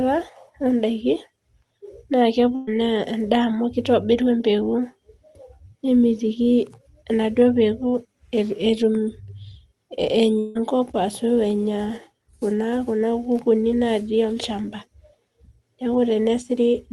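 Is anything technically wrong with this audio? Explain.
Yes. This speech clip has two gaps where audio was lost in transit.

At 2.55 to 2.69 s there is a burst of packet loss. Roughly 120 ms of audio never arrived in time. The receiver filled the hole by extending the last sound and letting it fade. So about 117 ms of smeared buzz or hiss replaces the real signal. Speech then picks up further along, with that stretch gone.

At 10.39 to 10.57 s the audio breaks again, and this one is likely a long network dropout. About 160 ms is missing. Almost all of it is covered by concealment, around 158 ms of continued, fading sound. No true silence appears. The result is a longer smeared patch, then a jump forward.

The call path sounds like Opus coding, with the upper band limited near 12 kHz.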